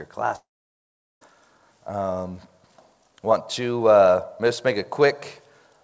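At 0.36 s the sound cuts out and doesn't return until 1.23 s, with nothing of that stretch recovered. The last bit of sound smears into a brief fading buzz before settling into roughly 0.8 s of near-silence. That's likely a long network dropout, with the receiver papering over the gap. Everything sits below 8 kHz, which fits a G.722 call path at 64 kbps.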